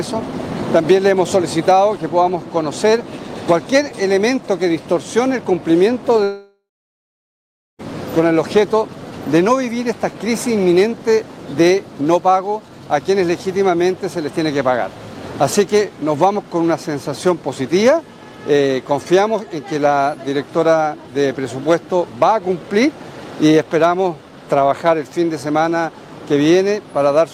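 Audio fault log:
6.23 to 7.81 s, long network dropout: the sound smears into a fading buzz, then goes silent for about 1.15 s before resuming with roughly 1.56 s of material gone. That's likely the receiver stretching the last audio while packets stopped arriving.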